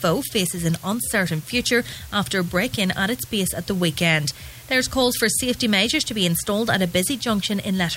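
A steady, even hiss runs through the whole audio, with no crunch or grit on louder passages. This is low bit depth with dither. The sound has been reduced to about 7 bits, with dither added before rounding, so the quantisation error becomes uniform white noise instead of distortion, sitting roughly 25 dB below the signal. A spectrogram shows a flat, unchanging noise floor across the full frequency range, and the waveform never settles to a clean zero line.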